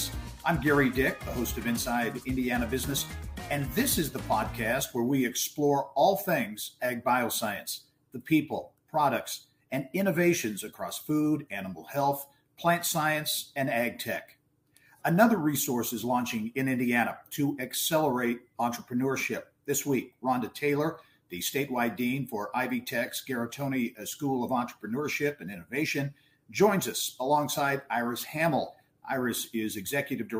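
No technical fault can be heard anywhere in this audio. Nothing in it calls for a time stamp or a cause.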